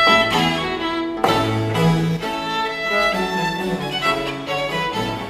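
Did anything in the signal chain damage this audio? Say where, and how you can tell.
Yes. From 2.17 s to the end of the clip, one channel drops out, most likely a failing cable or connector in the analogue wiring on one stereo leg. Once that side goes silent, the mono sum loses half its contribution, so material shared by both channels falls abruptly by about 6 dB at 2.17 s and stays down. Anything carried only in the lost channel vanishes.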